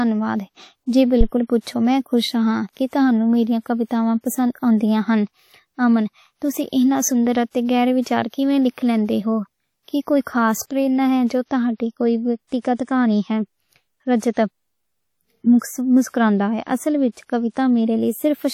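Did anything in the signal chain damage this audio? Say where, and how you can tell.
Yes. Phantom power thump, 1.21 to 1.27 s, just before "پچھو میں خوش": at the analogue input, a supply switched on or off on the live input pushes a step through the coupling capacitors, decaying within about 15 ms.

Throughout, plainly audible washy, ringing smear with nothing above 19.8 kHz points to the codec stage, likely WMA compression. The long transform blocks spread quantisation noise in time, consistent with roughly 48 kbps.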